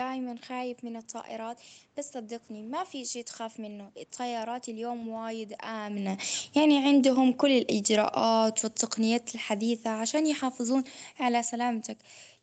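From 6.01 s to 11.91 s the automatic gain control, judging the input too loud or its background noise too strong, keeps pulling its gain down, about 12 dB in all. The speech sinks steadily over those six seconds, and the room background fades down with it.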